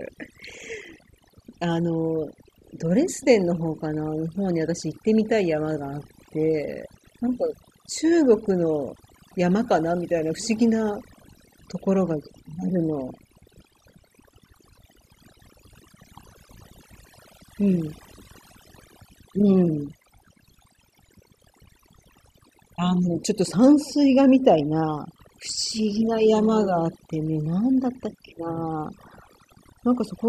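Overdone noise removal runs through the whole speech clip. A noise reduction stage set far too aggressively keeps cutting frequency bands down to nothing wherever they resemble its noise estimate. The background collapses into near silence flecked with twinkling specks, and the quieter parts of the voice are stripped away.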